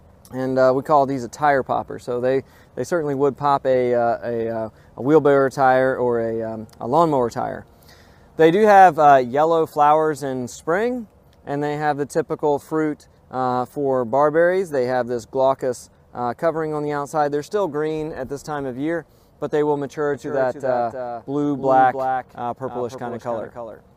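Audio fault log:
20.14 s to the end: a doubled audio track. The sound suddenly picks up a second copy of itself that runs about 300 ms behind, sitting roughly 10 dB under the original and carrying on until the clip stops. It has the full bandwidth and no decay or room tail, so it comes across as a hard, flat slapback rather than an echo. The likely cause is the same signal getting captured again through a slower path, or an edit that left two copies out of step.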